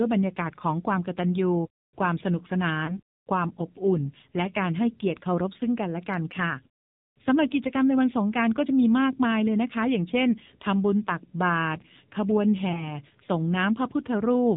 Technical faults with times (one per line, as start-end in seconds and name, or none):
0.00-14.57 AMR narrowband mobile codec
2.86-3.00 lost AMR speech frames
12.72-12.98 lost AMR speech frames